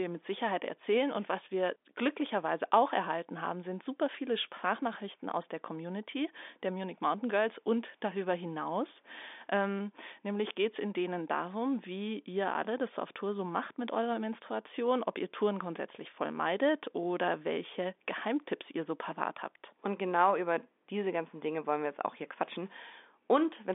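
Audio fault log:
No fault found in this audio fault log.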